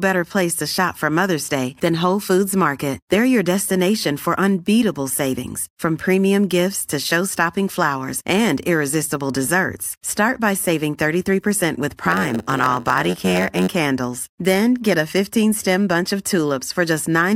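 From 12.02 to 13.68 s the speech gains a steady buzz at 91.9 Hz and drags, running at 0.919 speed. It is a block size mismatch (padded): short blocks are zero-filled, so a tiny gap repeats every block, stretching the timing.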